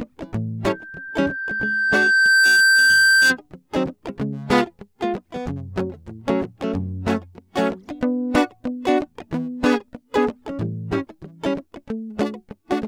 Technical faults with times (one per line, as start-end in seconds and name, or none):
0.68-3.37 loudspeaker feedback squeal